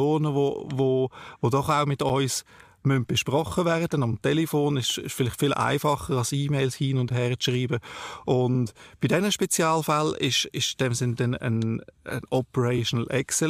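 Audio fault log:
2.09, 7.10 and 12.11 s, gap between chunks: 7 ms holes every 5 s, first after "wo doch auch mit" and last after "dann ein", where audio chunks join.
4.12–4.14, 8.54–8.58, 10.67–10.70 and 12.77–12.79 s, repeated frames: after "müssen besprochen werden" and at the rest, a 23 ms block (46 ms at 8.54 s) plays twice, giving a stutter.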